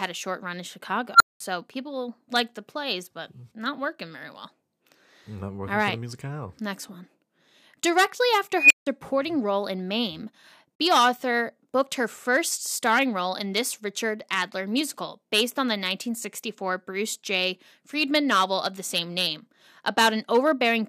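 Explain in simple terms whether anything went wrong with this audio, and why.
At 1.14 s a beep around 1.5 kHz swells to a harsh squeal in about 0.06 s, then drops into 0.2 s of silence. At 8.57 s a higher one near 3 kHz does the same. This is an unstable filter: a feedback processing step ran away, growing until its numbers overflowed and reset.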